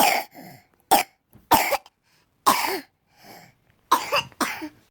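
At 1.01 to 1.03 s the sound jumps abruptly forward with no gap: a skip ahead, where roughly 0.4 s of audio was dropped and the two sides were joined almost directly.

From 1.71 to 3.37 s a steady robotic buzz at 375 Hz rides on the signal. This is buffer tearing, which fits a 128-sample buffer: a small slice of each period repeats audio a few milliseconds old, with hard joins.

Between 3.54 and 3.85 s the audio hurries at unchanged pitch, running at 114% speed. This is a jitter buffer speed-up, trimming around 50 ms in short pitch-period pieces to cut excess delay.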